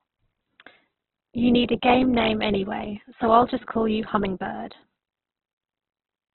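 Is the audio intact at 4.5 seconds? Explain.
No, at 4.5 seconds the speech carries the same damage heard through the whole clip: likely Opus compression at a very low rate, around 8 kbps. Bands are refilled with noise, so it sounds grainy and rough, and nothing remains above about 4 kHz, leaving it narrowband and muffled.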